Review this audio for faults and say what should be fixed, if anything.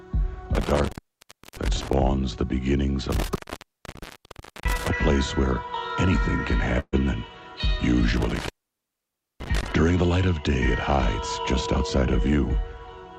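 Intermittent contact occurs three times: 0.55 to 1.93 s, with the line open for about 0.65 s; 3.10 to 4.90 s, open for about 1.3 s; and 8.17 to 9.72 s, open for about 0.91 s. Each time a loose connector in the signal chain briefly breaks continuity. The audio drops out with crackle at the break and the reconnection, and faint hiss remains while the circuit is open. To prevent it, reseat or replace the suspect cable and plug, and secure the connection against movement.

A burst of packet loss runs from 6.79 to 7.00 s. About 120 ms of audio never arrived in time for playback. The receiver concealed a gap of about 131 ms by extending the last received sound while lowering its level, with the final 50 ms or so of that fill silent, before playback resumed further along. The result is a held, fading tail followed by a jump, with the intervening material missing. To prevent it, improve network stability or add jitter buffering and forward error correction on the stream.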